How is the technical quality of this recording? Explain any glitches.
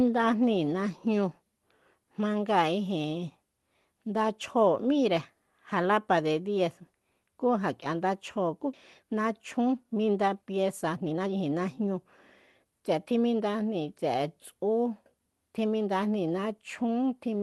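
It's a call-style recording with three timing glitches just after the middle. It sounds like an Opus-type call path, with the top end stopping around 12 kHz.

At 8.73 to 8.75 s there's a skip ahead. Roughly one and a half seconds of speech simply never plays, because it was lost in transit or dropped by an overflowing jitter buffer while later audio was queued. The two sides butt together with no gap, so the speech jumps abruptly.

From 9.03 to 11.95 s and again from 12.65 to 13.42 s you get jitter buffer speed-up. The buffer was holding too much, so the receiver kept snipping out tiny pitch-period chunks to catch up. That's about half a second in the first stretch at 116% speed, and only a little in the second at 109%. The speech sounds hurried but keeps its pitch.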